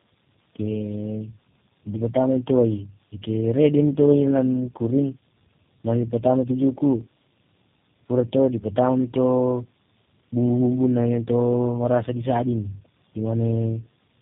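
Speech affected throughout by tandem speech coding: rough, muffled, warbly, with nothing above 3.7 kHz. This fits three low-rate codecs in a row, such as AMR-NB, GSM and G.729A, each recoding the previous one's output.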